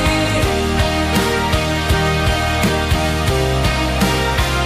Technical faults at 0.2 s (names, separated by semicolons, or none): none